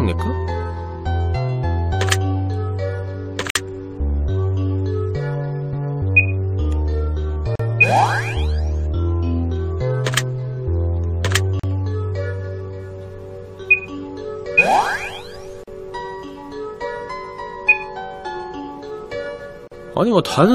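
At 3.50 s, 7.55 s, 11.60 s, 15.64 s and 19.68 s the sound drops out briefly, about every 4 s. These are gaps at a join of encoded pieces. The first lasts about 53 ms and the rest about 40 ms each. Each piece was encoded separately and joined without trimming, so the encoder's start-up delay and its end-of-piece padding both remain as silence. Codec smearing softens the edges, and the sound then resumes where it stopped.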